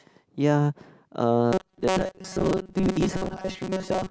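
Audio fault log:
1.53–4.10 s, robotic sound from repeated short buffers: speech becomes a rigid metallic 188 Hz buzz, likely a 5.3 ms segment replayed in place of most real audio.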